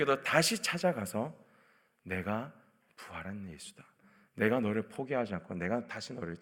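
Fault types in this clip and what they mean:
Channel delay (comb filtering): from 4.99 s to the end, one channel trails the other by a couple of samples, so summing to mono cancels energy around 10 kHz. The speech turns dull; a spectrogram shows a dark horizontal notch there, while the waveform barely changes.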